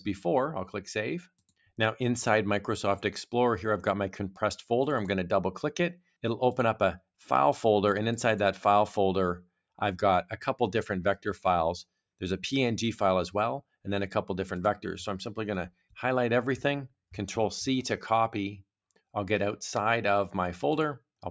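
At 5.95 to 6.1 s, 11.17 to 11.45 s and 15.7 to 15.96 s the sound is cut by the noise suppressor, which misjudges the material as noise and pulls its gain down by about 17, 16 and 17 dB respectively. Each dip removes about a seventh of a second of level, so sustained or decaying parts sink or have their tails clipped, while attacks pass through. The band stops around 8 kHz, as expected from call microphone processing.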